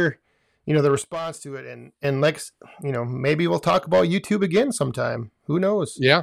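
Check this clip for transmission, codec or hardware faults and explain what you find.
One fault is present in this speech clip: a sudden gain jump. After "you know the", at 1.02 s, the level drops abruptly by about 12 dB and stays down until 2.04 s, returning just before "and like you know". The speech and the background noise fall and rise together, with no fade at either edge. That points to a step change in digital gain applied instantly rather than ramped, likely a level setting or bit shift switched mid-stream.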